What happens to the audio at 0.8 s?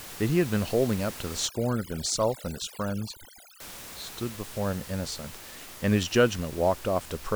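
Nothing goes wrong at 0.8 s: the speech is intact there, with only the room's own background noise, about 15 dB below the speech.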